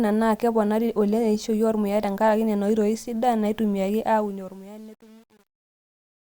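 From 4.06 s to the end at 6.35 s, the speech fade-out shows truncation distortion. The fade stage drops low bits without dither, which fits an 8-bit path. From 4.39 s the tail turns gritty.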